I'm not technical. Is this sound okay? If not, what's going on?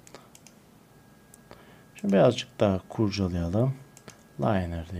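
Yes, this sound is okay, and there's nothing wrong going on in it.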